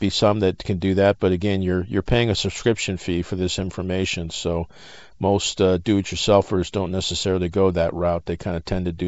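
No technical faults can be heard in the speech, which carries the band-limited character of G.722 wideband telephone coding, with nothing above about 7.7 kHz and a light coding texture that fits the 56 kbit/s mode.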